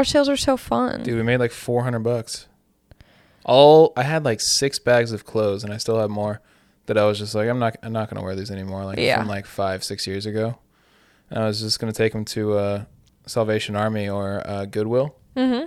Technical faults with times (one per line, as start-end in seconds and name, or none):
6.26 corrupt frame decoded